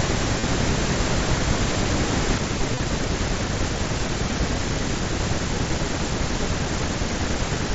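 From the very start until 2.38 s there's a doubled audio track: a second full-band copy about as loud, trailing roughly a fifth of a second behind, likely from an edit holding two copies out of step. It cuts off abruptly at 2.38 s. Meanwhile, around 0.40 s, concealed Bluetooth headset packet loss patches over a 30 ms gap with a brief buzzy stretch. It happens again from 2.73 to 2.80 s, where 45 ms of scattered losses, the longest run 22.5 ms, give a short buzz and a slight warble on recovery, all over the usual 8 kHz ceiling of the mSBC link.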